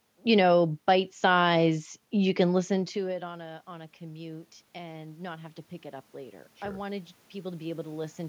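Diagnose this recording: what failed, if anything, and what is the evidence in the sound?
The call-processing stage's automatic gain rising caused this. After the talker moved away around 2.5 s, the input fell about 22 dB. From 2.69 to 8.22 s the control slowly added about 10 dB of gain, so voice and room noise swell together.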